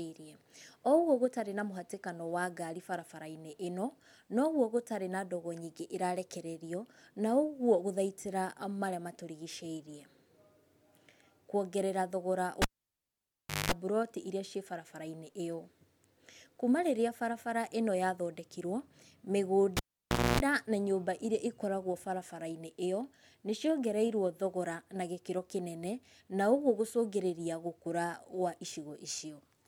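At 12.62 s a live cable is pulled and plugged in. A pop cuts the speech for 1.05 s. A 50 Hz buzz lasts 0.2 s before "mburoti ĩrĩa" returns. At 19.77 s it recurs: 0.58 s gap, 0.27 s of 60 Hz buzz.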